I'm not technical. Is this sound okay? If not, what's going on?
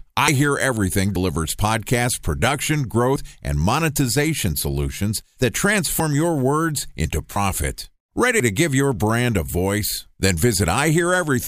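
No. The speech jumps forward six times, at 0.28, 1.16, 3.16, 6.0, 7.36 and 8.4 seconds. At each jump a tiny slice of the talking goes missing. Most slices are about 40 milliseconds. The ones at 6.0 and 7.36 seconds are nearer 70 milliseconds. The likely cause is a dropped buffer (overrun). The recording program fell behind, so the sound card overwrote audio before it was saved.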